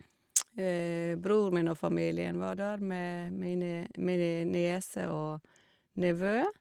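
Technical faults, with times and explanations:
No technical faults turn up in this speech recording, which passes through Opus voice compression at 24 kbps in hybrid mode with the full audio band kept.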